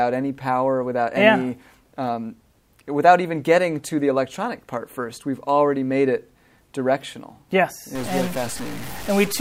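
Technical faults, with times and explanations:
7.95 to 9.41 s, stuck bit: the sound turns harsh and buzzy through to the end, with a gritty noise floor. This is likely one data bit held fixed, so roughly half the samples are off by a step of around -30 dBFS, following the waveform.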